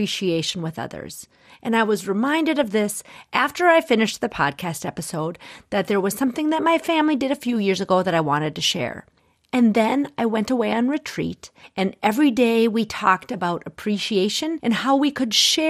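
MP2 compression runs through the whole speech recording, with plainly audible damage. The sound is dull and grainy with a gurgling edge, likely from MPEG Layer II coding at a rate near 80 kbps, which starves upper sub-bands of bits so they drop out and coarsely quantises the bands left.

DAB burbling hits from 2.61 to 2.64 s, between "I was reminded" and "this after I finished". A brief patch of noise blips breaks through as a small share of corrupted bits slips past error correction, putting short blips of noise into single sub-bands.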